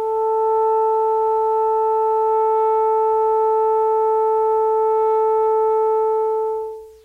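Low bit depth without dither runs through this music clip from start to finish: quiet passages turn gritty, with grainy distortion that tracks the music and sits roughly 45 dB below it. The likely cause is rounding to about an 8-bit word length with no dither, so the error follows the signal.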